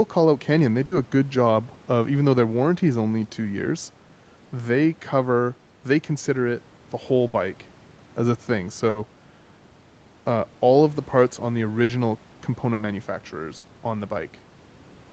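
Six short bursts of packet loss land in this speech, at 0.85, 7.27, 8.89, 11.83, 12.73 and 13.57 s. Each time a run of packets went missing, and the receiver stretched the last bit of sound for about 60 ms, fading it into a held buzz or a dying hiss, before jumping ahead with roughly 60 ms of speech simply gone. The band-limited Opus call sound, topping out around 8 kHz, carries through each glitch.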